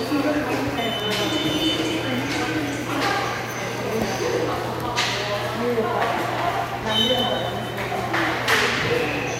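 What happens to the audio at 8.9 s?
Nothing goes wrong at 8.9 s; the audio carries on intact through that moment, with no dropout, click or distortion.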